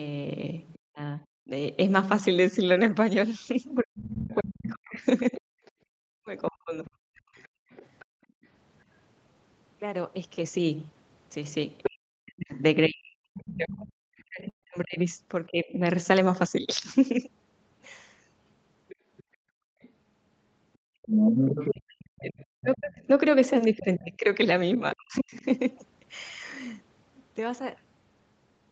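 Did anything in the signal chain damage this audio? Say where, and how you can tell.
Yes. Other side's voice leaking through at 0.73–0.79, 4.28–8.47, 11.83–13.43 and 18.88–25.41 s, rising from faint to level with the speech. This is likely residual echo the call processing's echo canceller failed to remove.

Speech suppressed in double talk at 0.89–7.17, 11.89–15.84 and 21.65–25.43 s. The talker dips by up to roughly 40 dB while the far side speaks, likely as the canceller turns both down.

Background gated by the echo canceller at 7.48–8.44 s (about 40 dB down) and 19.23–21.02 s (about 36 dB). The room sound drops out while the loudspeaker plays, then returns.

Burst of packet loss on the network at 14.49–14.64 s. About 140 ms of audio is missing, concealed by a held, fading continuation before playback resumes further on.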